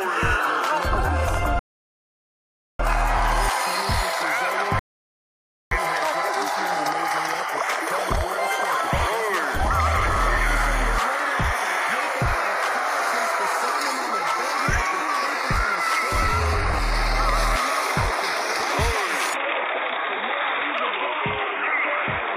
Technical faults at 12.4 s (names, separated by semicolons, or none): none